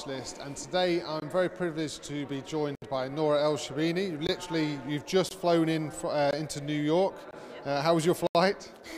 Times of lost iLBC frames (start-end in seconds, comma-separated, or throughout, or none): none